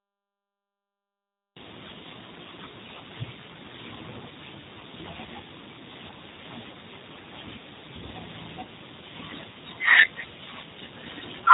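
Digital silence runs until 1.56 s, where the speech starts abruptly mid-sound with no attack or fade: a cut-off start, because the recording began late. Throughout, the speech sounds rough, band-limited and slightly synthetic, with nothing above 4 kHz. These are plainly audible G.729 codec artefacts, pointing to an 8 kbit/s G.729A stream that rebuilds speech from a vocal-tract filter, a pitch predictor and sparse pulses. At 4.79 to 4.83 s and again at 7.12 to 7.16 s, the speech briefly smears into a buzzy tone or coloured noise that fades, each time for about 20 ms. This is VoIP packet loss concealed by the speech codec: the decoder extrapolated its last pitch and filter across the gap, which fits two lost 10 ms frames.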